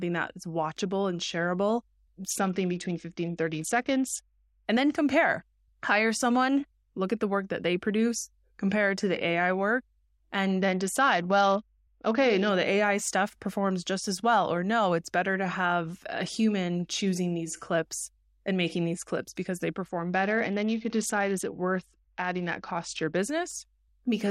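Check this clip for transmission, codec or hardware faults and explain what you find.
Three stretches of this speech clip go dull and gritty, each a Bluetooth SBC bit pool drop: 2.30 to 4.66 s, after "is watchable and shareable" and before "and then compare"; 10.61 to 12.49 s, after "work and"; and 19.84 to 23.17 s, after "these clips because they". In each, the treble dulls and a coarse, grainy noise rises, then clears. The link throttled the encoder's bit allocation from a bit pool of 28 down to 8, consistent with roughly 72 kbps. This starved the upper sub-bands of bits and quantised the rest crudely.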